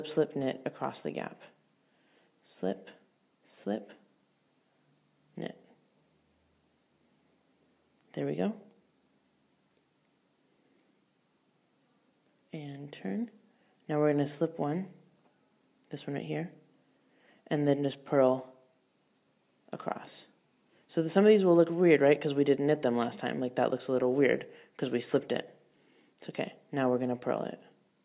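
No dropouts, distortion, noise bursts or other technical faults can be heard anywhere in the signal.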